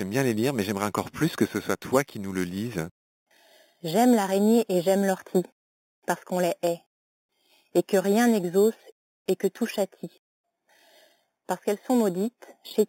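Imaging from sample-and-hold upsampling runs throughout the speech. Samples were repeated to go from 8 kHz to 48 kHz, with no smoothing filter. Mirrored spectrum copies result, the lowest at 4 to 8 kHz, about 18 dB down. It sounds like metallic fizz.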